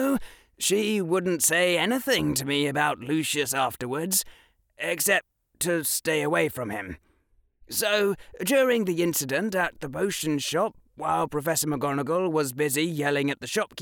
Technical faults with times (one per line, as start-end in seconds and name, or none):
none